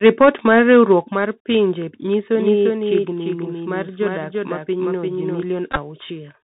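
Speech travels the whole way through a Bluetooth CVSD headset link, a narrowband codec that sends one bit per sample at 64 kHz, each bit only nudging the level up or down by an adapting step. Nothing above 4 kHz survives, so the sound is boxed in and telephone-thin. The codec damage is plainly audible: a granular hiss sits under the speech, sibilants come out scratchy, and bright loud moments smear where the step size cannot keep pace.

From 0.05 to 0.93 s the peaks run about 6 dB past the converter's limit, with a few percent of samples flattened at the limit. This microphone overload most likely comes from the input gain being set too high for the converter. The tops of the loudest moments are sliced off, giving a harsh, crackly edge that stops shortly before "mar pinje nyiso".

The microphone volume is stepped down twice. The likely cause is call software reacting to the hot, clipping input by cutting the device gain in a single jump. 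The first step, at 0.07 s, lowers the level by about 2 dB, just after the overload begins. The second, at 1.08 s, right before "mar pinje nyiso", drops it by about 5 dB. Voice and background fall together at each point, abruptly rather than as a fade.

Just after "mar pinje nyiso", from 2.35 to 5.43 s, a doubled audio track appears. It is likely a second, slower capture path or an edit that left two unaligned copies. A full-band duplicate trails the original by around 400 ms at around 5 dB quieter. It has no room colour or decay tail, so it sounds like a flat, detached second layer, and it switches in and out sharply at both ends.

Between 5.72 and 5.79 s, a Bluetooth headset packet repeated fault shows up. Voice packets between headset and phone were dropped, about 34 ms lost across roughly 53 ms, which points to several packets. The chip kept re-decoding the last good one, and in the longest run of around 15 ms that repetition every 3.75 ms produces a short, steady buzz near 267 Hz before clean packets resume.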